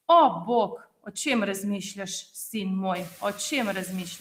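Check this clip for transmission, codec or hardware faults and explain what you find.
There's one fault here, from processing rather than transmission or hardware. Between 0.70 and 1.16 s there's speech cut by the noise suppressor. It mistook soft stretches, roughly a fifth of a second in total, for background and pulled them down by up to about 17 dB, so they sound swallowed and faint. The room noise that rises by about 19 dB around 3 s, sitting about 20 dB under the speech, is just the room itself.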